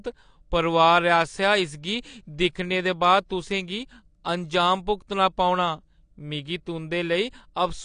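A speech recording, and the AAC compression damage is plainly audible all the way through. Nothing comes through above roughly 9.8 kHz, so the top end sounds dull and closed in, and sibilants and sustained sounds pick up that smeared, warbly, fizzy texture. The likely cause is AAC-LC coding at a low bitrate, which fits something like 32 kbps, where the encoder drops the cut-off and starves the upper bands.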